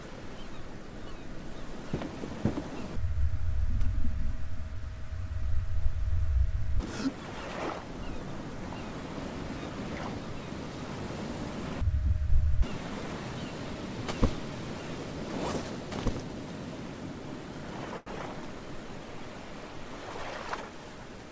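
At 17.98 s a packet failed to arrive on time and the jitter buffer ran dry, causing a short stall from a late packet. Instead of leaving a gap, the receiver stretched the last stretch of sound for about 85 ms until the packet turned up, then carried on from where it had stopped. Nothing is lost, but one sound lingers unnaturally long, with a faint buzz or dip, and the playback delay grows by 85 ms.

From 20.03 to 20.85 s a jitter buffer speed-up follows. The buffer had built up more audio than it aims to hold, so the receiver trimmed short slices a pitch period or so long, over and over, removing about a tenth of a second in total. Playback runs at roughly 110 % speed with the pitch unchanged, so this stretch sounds noticeably hurried. All of this rides on a call codec path that leaves nothing above 8 kHz, which fits G.722.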